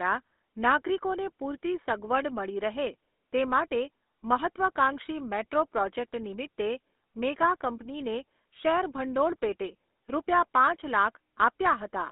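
Throughout the clip, the speech has passed through the GSM full-rate codec. The line band runs from 250 Hz to 3.5 kHz. The excitation is rebuilt from sparse, regular pulses, so the voice sounds buzzy and gravelly. The damage is plainly audible, and fits a 13 kbps rate.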